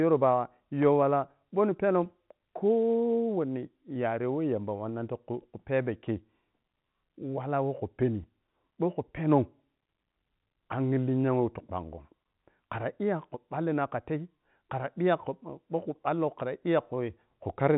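No faults can be heard anywhere in the speech. The G.711 telephone coding at 64 kbps keeps everything below 4 kHz, and any quantisation noise riding under the signal is faint at most.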